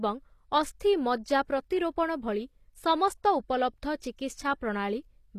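From the start, the speech has a synthetic-sounding top end, with nothing above 14.9 kHz and the s sounds coming out gritty and lispy. This is most likely HE-AAC compression, at a low rate consistent with about 24 kbps. Only the lower spectrum is properly coded. The treble is rebuilt by copying lower bands upward under a coarse envelope, so the high harmonics don't line up with the real ones, and the damage is plainly audible throughout.

At 4.00 s there is pre-echo: a short burst of hiss, spread over about 16 ms, sits just ahead of a sharp onset. A sudden attack near the end of a transform block causes it. The quantisation noise sized for the loud attack is spread over the whole block, including the quiet moment before it. The hiss arrives early, and the attack itself sounds softened and smeared rather than crisp.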